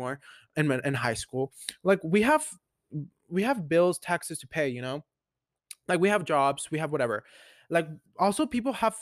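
A speech recording, and nothing is technically wrong with it.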